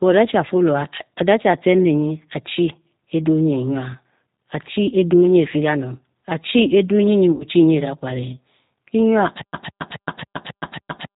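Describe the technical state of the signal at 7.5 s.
VoIP packet loss concealed by the speech codec runs from 7.32 to 7.45 s and ends just before "nyi edakware", so 7.5 s sits in its tail. About 80 ms of audio went missing, which fits four 20 ms packets. The decoder bridged the gap by repeating its last pitch and vocal-tract filter at falling gain, giving a stretched, fading sound. Because each frame builds on the previous one, the speech at 7.5 s is still weak or distorted as it recovers.

Underneath, the G.729 codec colours the whole signal, and its damage is plainly audible here. The sound points to an 8 kbit/s G.729A coder, which models each 10 ms frame with a filter, a pitch predictor and a few pulses and passes nothing above 4 kHz. The result is a muffled, rough, slightly synthetic quality that the concealment tail sits on top of.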